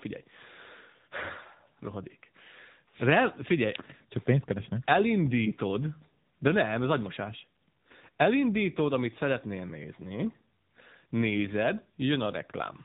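Throughout, AMR narrowband mobile codec damage removes everything above 4 kHz and, unlike a plain band-limit, makes the speech buzzy and synthetic, which fits a bitrate near 8 kbps.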